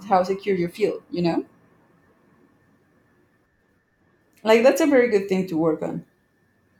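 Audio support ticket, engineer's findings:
No audible faults found in this speech recording.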